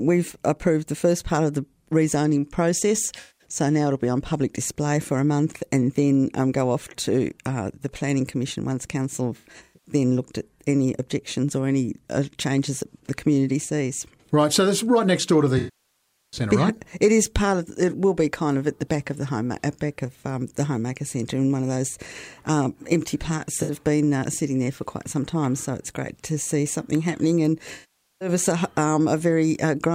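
AAC frame loss with concealment occurs at 3.20–3.45, 9.37–9.92, 15.58–16.40, 23.62–23.72 and 27.74–28.28 s. The decoder rebuilds missing frames from the last good spectrum, leaving smeared, phasey patches. At 9.37 s the loss comes in scattered short runs, and at 15.58 s the longest gap runs about 0.75 s.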